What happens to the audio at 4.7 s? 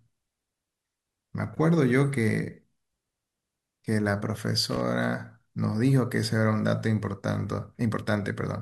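At 4.71 s the speech breaks into loose connector crackle lasting about 0.1 s, until 4.81 s. A worn contact is rapidly making and breaking, chopping the signal into an irregular scratchy burst; the waveform shows jagged dropouts and spikes, and the spectrogram shows broadband vertical streaks.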